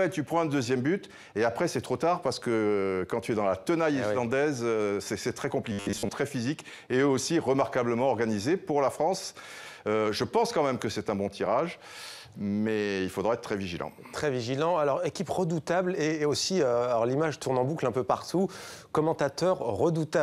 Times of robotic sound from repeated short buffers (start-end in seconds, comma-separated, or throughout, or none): 5.72-6.10